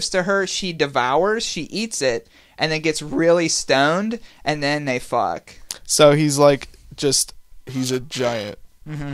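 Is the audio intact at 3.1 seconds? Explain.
Yes, at 3.1 seconds the speech plays through with no dropout, click, distortion or other fault to be heard.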